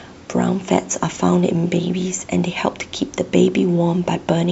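No faults in the speech: the call microphone processing leaves nothing above 8 kHz and trims the lowest bass, as expected, and the room noise sits about 33 dB below the speech.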